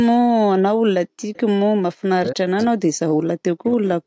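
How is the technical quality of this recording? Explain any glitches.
The recording has three kinds of echo-canceller trouble, all clustered after the first second of this speech clip.

From 1.06 to 1.21 s, the background is gated by the echo canceller. While the far end's sound was playing through the loudspeaker, the canceller clamped the microphone, so the room tone sinks by about 40 dB for 150 ms and then snaps back. That sets it apart from double-talk suppression, where it is a voice that gets cut.

Around 1.34 to 1.39 s comes a brief echo leak, a very faint delayed copy of speech far below the main voice. It trails the original by 291 ms. The likely cause is that the loudspeaker side's echo canceller left a residue of what its microphone picked up and sent it back. Unlike gating, this adds sound rather than removing it, and the fixed delay gives it away.

From 2.1 to 3.0 s and again from 3.17 s to the end, the talker's speech is suppressed in double talk. 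For most of each stretch the voice drops deeply, sounding ducked. The likely cause is both sides speaking at once, with the canceller unable to separate the local talker from loudspeaker echo and so attenuating everything. These dips follow overlapping speech, whereas gating hits background alone. Throughout, the call path's microphone processing limits the sound to nothing above 8 kHz.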